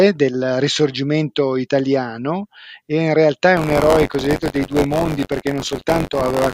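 From 3.56 s, just after "e in realtà è", buffer tearing runs to the end. Writer and hardware reader have slipped, so about a tenth of each buffer repeats audio around 20 ms old. This gives a robotic 93.8 Hz buzz that fits a 512-sample buffer.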